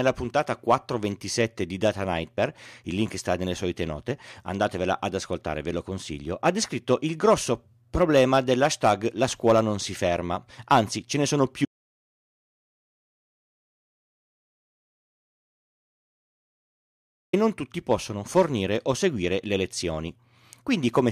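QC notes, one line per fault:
11.65–17.33 s, audio dropout to silence: the speech cuts off mid-flow and the track falls to silence, with no room tone, for about 5.7 s before resuming abruptly. The input was likely lost while the recorder kept writing silence, so that stretch is gone.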